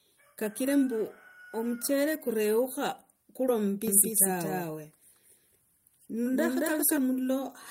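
From 3.88 s to 6.98 s the speech carries a doubled audio track: a second, equally loud copy trails by roughly a fifth of a second, likely from a slower capture path. Unlike an echo, it has no decay or room colour, and it switches on and off abruptly.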